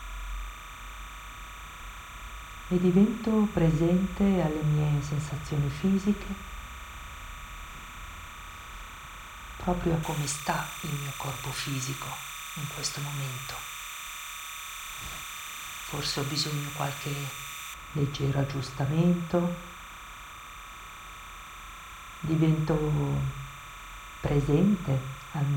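Timecode bleed runs through the whole clip. Linear timecode at 30 frames per second has leaked in from a neighbouring track or cable. Its square wave flips between tones around 1 kHz and 2 kHz. It sits roughly 15 dB below the wanted sound. The result is a steady chirping warble behind everything. It never lets up.

From 10.03 s to 17.74 s, pre-emphasis is left on. The treble was lifted with a J.17 curve, and the matching de-emphasis was never applied. At 10 kHz the boost is about 11 dB relative to 1 kHz. The sound turns thin and bright. Sibilance becomes sharp and prominent. At 17.74 s the tonal balance drops back, but the timecode warble carries on.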